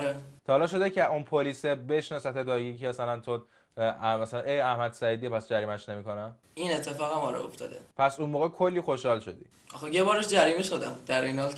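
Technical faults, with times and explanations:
No technical faults are audible anywhere in the clip.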